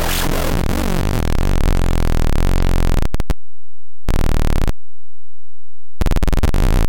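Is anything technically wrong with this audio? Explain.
Yes. The whole clip has a wrong sample width fault. The audio was stored as 16-bit integers but is being read as unsigned 8-bit values. Each original sample is split into two separate values. One carries the top bits of the real signal. The other holds low-order bits that behave like noise. The result is loud, harsh hiss with the original sound buried underneath. Doubling the sample count plays everything at half speed, an octave lower in pitch.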